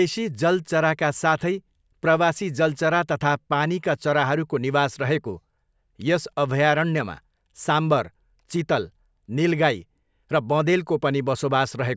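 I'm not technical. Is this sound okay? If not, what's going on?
Yes, nothing stood out as a problem when listening to this recording.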